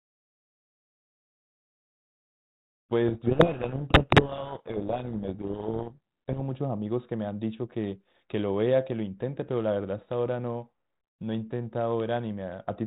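From 3.08 to 6.39 s the speech is buried in harsh distortion. This is a codec payload misread. The G.726 code words arrive with their bits in the wrong order, so the decoder rebuilds wrong sample differences. The sound stays distorted until the order matches again. Elsewhere the light band-limited coloring fits G.726 at 32 kbit/s.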